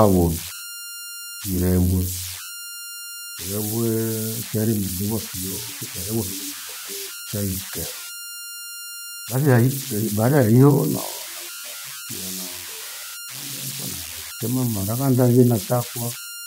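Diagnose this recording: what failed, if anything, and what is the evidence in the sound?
The converter stage failed. Converter idle tones run through the whole speech clip. A whistle near 1.5 kHz sits in the pauses, with grainy noise under quiet passages, about 11 dB below the signal. Without dither, the delta-sigma modulator locks into repeating bit patterns at low levels.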